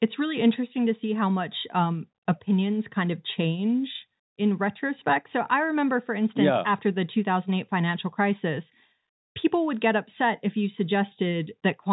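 No technical faults are audible.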